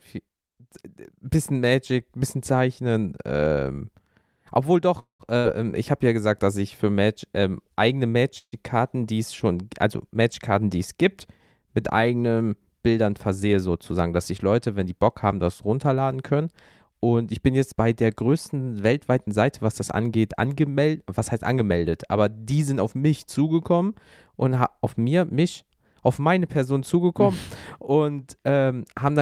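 At 4.99 s the speech stalls: the last sound hangs on as a brief fading buzz or hiss, then about 130 ms of near-silence follows before it resumes at 5.23 s with nothing skipped. The same happens more briefly from 8.38 to 8.55 s, with about 60 ms of the roughly 140 ms pause silent. These are call audio freezes, likely from packets held up in transit so that the jitter buffer ran dry. The receiver stretched the final sound to fill the wait, and each one pushed later audio back by the length of the pause.

From 5.38 to 5.47 s, just after the first freeze, there is a shorter held, fading sound of about 66 ms. When the speech comes back it has jumped ahead, and about 60 ms is gone. This is a burst of packet loss. Several consecutive packets never arrived in time, so the receiver extended and faded the last sound, then continued from the next packet it had.

From 12.88 to 14.04 s the speech runs about 10% fast, and from 17.73 to 19.42 s about 13% fast. 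Both passages sound hurried, but the pitch stays the same. This is jitter buffer speed-up. After delayed packets arrived together, the buffer held more audio than it needed, and the receiver cut many pitch-period-sized slices to shed roughly a tenth of a second, then a fifth.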